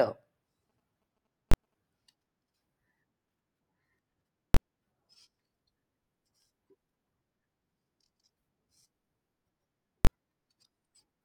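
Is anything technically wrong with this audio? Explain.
Yes, two kinds of fault are audible in this speech clip.

From 0.70 to 1.74 s there are GSM signalling bursts: a galloping dit-dit-dit of short buzzes, roughly 30 dB below the speech. A 2G phone nearby is exchanging brief signalling with the network rather than carrying a call, and the audio circuitry rectifies the radio pulses into a buzz at 217 Hz. The bursts come in short irregular groups instead of a steady hum, which sets them apart from mains hum or a continuous in-call GSM buzz.

There are three invalid numbers at full scale events, at 1.52 to 1.54 s, 4.54 to 4.57 s and 10.05 to 10.07 s. A calculation produced infinite or invalid values, and the output was driven to full scale for one processing block of 21.33 ms, which fits a 1024-sample block. At that length the start and end pops merge into a single very loud bang. The first lands inside the GSM buzzing. 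Unlike a click or a dropout, each bang sits flat at one extreme value and lasts exactly one block.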